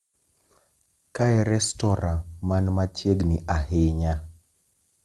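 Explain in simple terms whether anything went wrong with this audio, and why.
Nothing went wrong here: the speech simply came through an ordinary internet call connection, which trims away the very top of the sound above 12 kHz, and that's just how this kind of call carries audio rather than anything breaking.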